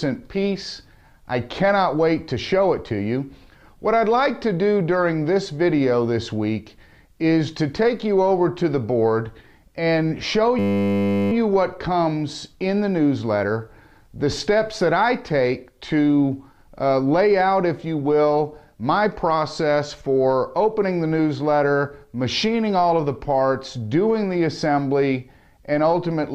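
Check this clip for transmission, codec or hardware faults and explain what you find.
One hardware fault is present, a system hang loop. From 10.59 to 11.32 s the sound freezes into a steady buzz. The computer or its audio driver stalled, and the sound card kept replaying the last stretch of its ring buffer. That stretch is 10 ms long, which fits a very small buffer. It repeats about seventy times at 100 Hz, so it fuses into a flat 100 Hz tone instead of a stutter. Almost no audio is lost when it ends.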